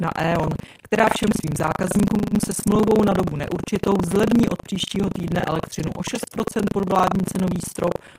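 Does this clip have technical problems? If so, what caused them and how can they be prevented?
Yes, there's buffer tearing running through the whole clip: a steady robotic rattle at about 25 Hz that rides on the speech and drops out in the gaps. The writer and the hardware reader of the ring buffer have drifted so they cross mid-period, so in each 40 ms buffer roughly a fifth is stale audio from around 70 ms earlier, spliced in with hard edges. To prevent it, keep the write pointer safely ahead of the read pointer and resync on drift.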